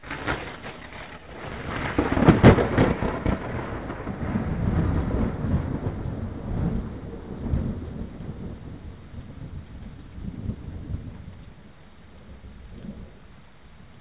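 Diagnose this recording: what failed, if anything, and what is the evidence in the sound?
Nothing stood out as a failure on listening to these sounds, which arrive through a call path that carries nothing above 4 kHz.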